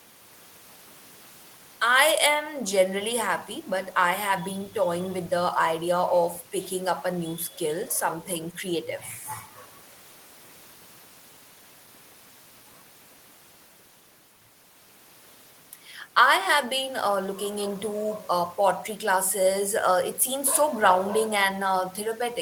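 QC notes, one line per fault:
Nothing stood out on listening to this speech recording.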